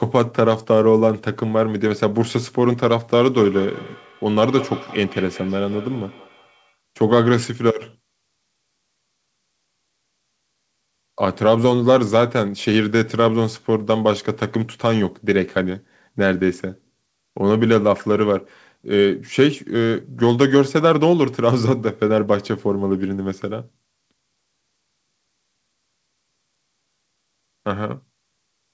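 Speech, with a feedback echo between two devices from 3.37 to 6.77 s: the sound returns at roughly a fifth of a second, each pass thinner and more ringing, peaking about 17 dB below the speech. Unlike room reverb, the repeats are distinct and evenly spaced. The call path also cuts off everything above 8 kHz.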